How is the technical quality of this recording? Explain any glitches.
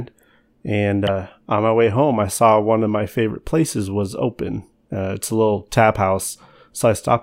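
The recording has one audible glitch. At 1.07 s there is damaged data in the compressed stream, heard as a very short blip in the speech. Part of the encoded data at that point was lost or corrupted. The decoder could not read those frames correctly. It lost sync and searched for the next valid frame header. That brief misread produces the blip. It is over in a fraction of a second, and the speech then carries on.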